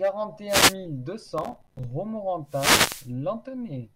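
At 0.48 to 0.75 s, a wireless microphone noise hit cuts across the speech. A short swish of static rises. The radio signal has faded as reflections cancel it, so receiver noise swells over the voice.

From 1.38 to 1.84 s, processor overload crackle tears through the speech. The processor misses its deadlines again and again. Each miss drops a tiny slice to silence with hard edges. The gaps suggest buffers of around 5 ms, roughly thirty missed.

From 2.46 to 3.12 s comes a second, longer wireless microphone noise hit. The signal fades again, and a burst of static rises for about two-thirds of a second.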